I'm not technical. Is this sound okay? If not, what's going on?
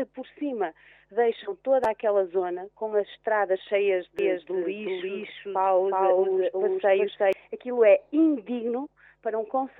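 No, not quite. From about 4.19 to 7.33 seconds there's a doubled audio track: the same sound plays twice, with a second copy trailing a little under half a second behind the first and just as loud. It's clean, not a room echo, and it cuts in and out abruptly at those times. The likely cause is the audio getting picked up a second time through a slower route, or an edit leaving two copies overlapping.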